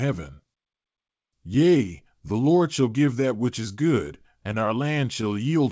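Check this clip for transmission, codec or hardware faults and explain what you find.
Two related timing faults are present, both caused by the sender's clock running slower than the receiver's.

Clock drift between sender and receiver runs through the whole speech clip. The sender's clock runs about 2% slow, so the jitter buffer keeps draining and the receiver must repeatedly stretch the stream. A spectrogram shows small, unevenly spaced seams where harmonic tracks jump or briefly duplicate.

Repeated timing corrections occur from 0.30 s to 5.30 s. The receiver repeats short pieces to fill the gaps, slowing playback to 99% speed and adding around 70 ms overall. These edits are small. The waveform shows repeated short segments at irregular spacing. The band limit at 8 kHz, consistent with a G.722 call path, is visible as an empty region above that line.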